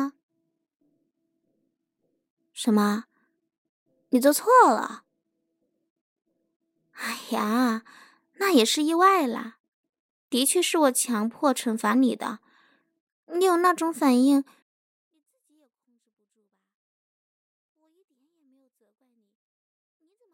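It's a speech recording, and at 14.62 s it hits a 24-bit alignment error (too quiet): the level drops by about 48 dB in one step and stays there to the end. That fits 24-bit samples sitting in the low bytes of 32-bit words being read as full 32-bit values.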